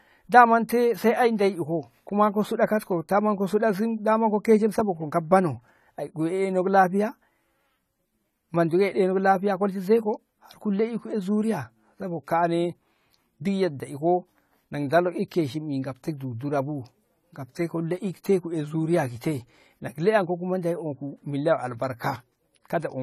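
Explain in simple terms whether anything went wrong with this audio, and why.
Something did go wrong, and it lasts the whole recording. The speech sounds dull and a bit smeared, as if the crisp top end has been shaved off, and the hissy s and sh sounds come out fizzy or warbly. That's the signature of AAC compression, likely squeezed too hard. The encoder throws away sound it thinks you won't notice, but at this level it discards too much, leaving gaps and a muffled, swirly texture.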